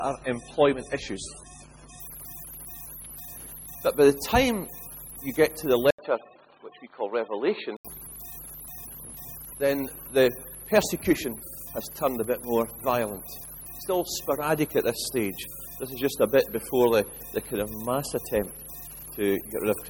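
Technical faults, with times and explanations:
0.0–2.0 s, adaptive stream starting at a low bitrate: the opening plays as 24 kbit/s MP3 with nothing above 10.6 kHz and heavier codec smearing, then jumps to 128 kbit/s once the connection is measured. Unlike a device change, the improvement arrives instantly, with no gap or new noise.
5.91–7.85 s, input switched to a poorer device: the sound abruptly turns dull and boxy, with nothing above 4.4 kHz and an 80 ms silence at the switch, likely from a second microphone or headset call profile. A fresh noise floor appears roughly 55 dB down, at unchanged level, then clears.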